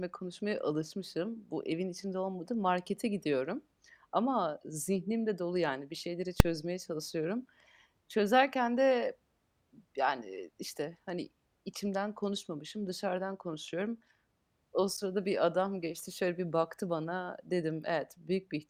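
At 6.40 s the speech is broken by a single hard bang: invalid numbers at full scale. A calculation returned infinite or invalid values that were pinned to maximum level for about 2.9 ms, which fits a 128-sample block. Unlike an ordinary click or clipping, it is a brief slab of maximum level, far louder than the surrounding speech.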